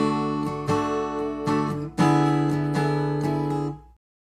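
A recording of everyday sound with no technical fault to be heard anywhere in it. Nothing in the clip calls for a time or a cause.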